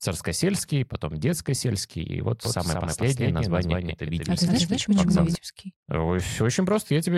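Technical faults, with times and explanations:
2.45 to 5.35 s, doubled audio track: after "и вот", a dry copy trails about 200 ms behind, a few dB quieter. It starts and stops abruptly, likely from a slower second capture path.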